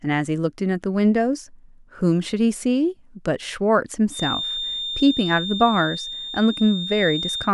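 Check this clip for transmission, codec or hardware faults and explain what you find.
There's one fault: a feedback whistle from 4.09 s to the end of the speech. A thin, steady 3.6 kHz tone sits around 10 dB below the voice, swelling and fading slowly in level. The likely cause is a speaker-to-mic loop hovering right at the edge of feedback.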